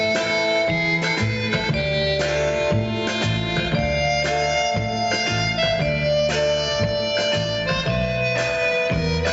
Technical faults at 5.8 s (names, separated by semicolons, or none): gain pumping